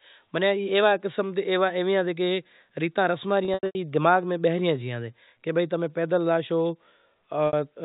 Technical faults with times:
3.45-3.75 packet loss with pitch repetition
7.47-7.53 packet loss with pitch repetition

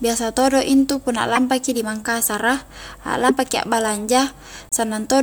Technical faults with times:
1.35-1.38 broken MP3 bit reservoir
3.28-3.31 broken MP3 bit reservoir
4.69-4.73 broken MP3 bit reservoir

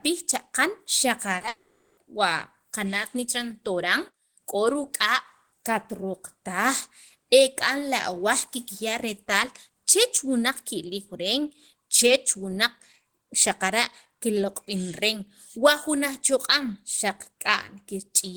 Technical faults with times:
1.36-1.48 repeated packet loss (robotic sound)
1.48-1.98 long network dropout

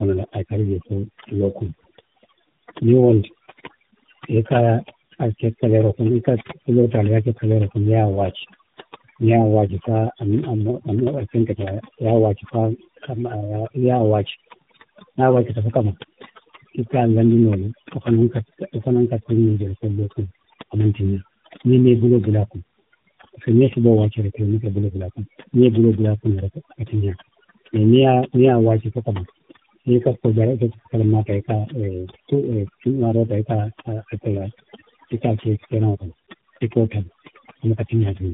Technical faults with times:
0.00-38.34 overdone noise removal
0.00-38.34 tandem speech coding

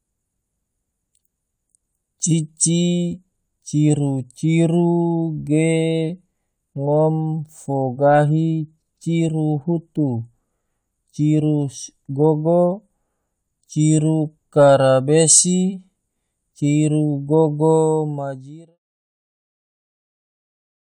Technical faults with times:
none

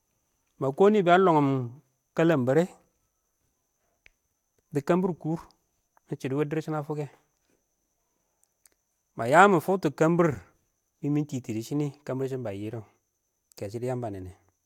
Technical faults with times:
none

